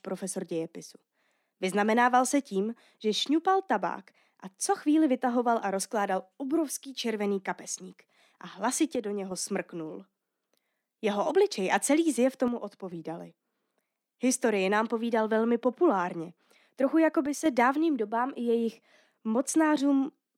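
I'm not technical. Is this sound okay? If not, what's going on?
No. The speech briefly sounds quieter at 8.95 to 9.31 s, 12.48 to 12.92 s and 17.26 to 17.46 s, most likely because one channel drops out. Unlike a full dropout, the sound never goes silent. It just sags, then snaps back.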